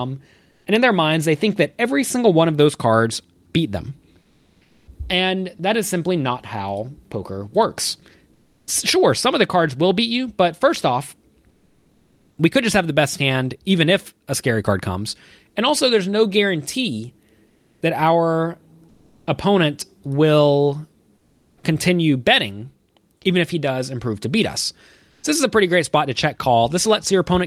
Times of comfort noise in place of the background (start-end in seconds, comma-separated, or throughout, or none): 0.51-0.65, 4.21-4.87, 8.33-8.67, 11.49-12.37, 17.47-19.27, 21.17-21.63, 25.09-25.23